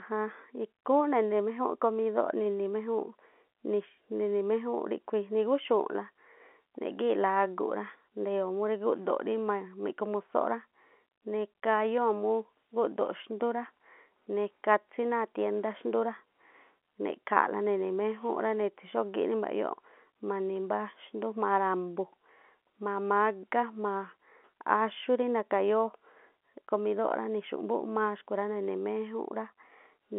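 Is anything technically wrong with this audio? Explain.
No, nothing is technically wrong.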